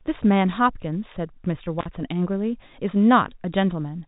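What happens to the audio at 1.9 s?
Just before 1.9 s, from 1.79 to 1.86 s, the sound hits an intermittent contact. A loose plug or cable briefly loses connection, and the signal drops out for about 48 ms. Short crackles mark the break and the reconnection. During the gap only faint hiss remains. The dropout sits inside the telephone band of the G.711 coding, so the clicks sound dull and capped at 4 kHz.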